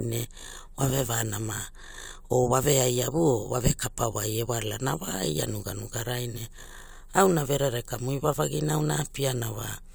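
Nothing stood out on listening to this speech recording.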